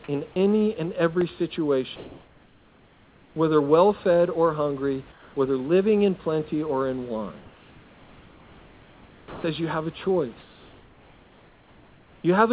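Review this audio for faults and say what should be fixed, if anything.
At 0.32 to 0.36 s a brief stretch of the speech drops out and is replaced by a flat hiss for about 40 ms before the sound returns. This is sound dropped by the voice detector. The sending side's detector most likely judged a quiet moment of speech to be background and stopped transmitting, so the receiver filled the gap with comfort noise and roughly 30 ms of real speech never arrived. To prevent it, lower the detector's threshold or lengthen its hangover so quiet speech keeps it open.

From 1.08 to 1.33 s a gritty burst of crackle tears across the speech, made of tiny hard-edged holes. This is processor overload crackle. The audio thread repeatedly failed to finish its very small buffers on time, and each missed deadline left a sliver of silence. The short gaps point to a buffer of around 1.5 ms, with a handful of them missed in a row. 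To prevent it, use a larger audio buffer or reduce competing processor load during the call.

In four pauses the room's natural background gives way to a smooth, featureless hiss about 2 to 3 dB quieter than the real room tone. This happens at 1.96 to 3.36 s, ending just before "well fed or hungry". It happens again at 5.12 to 5.36 s, between "well fed or hungry" and "living in plenty or". The third is at 7.40 to 9.44 s, between "in plenty or in" and "you have a", and the last is at 10.40 to 12.24 s. This is comfort noise in place of the background. Discontinuous transmission likely stopped sending during the pauses, and the receiver synthesized an approximation of the background instead. The room tone sits around 30 dB below the loud speech. To prevent it, disable discontinuous transmission or tune the comfort noise level to match the real background.

At 9.41 to 9.44 s the speech that resumes with "you have a" starts abruptly, with its soft beginning missing. 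This is an onset clipped by the voice detector. The detector was most likely slow to reopen after the long pause, and about 30 ms of the start was replaced by comfort noise. To prevent it, shorten the detector's attack time or add a look-ahead so onsets are sent in full.

The call codec path band-limits the audio to 4 kHz, as G.711 does, and that part needs no fix.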